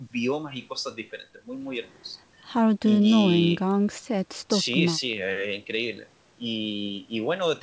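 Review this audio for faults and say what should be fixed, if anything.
No faults turn up in this audio, so nothing needs to be fixed.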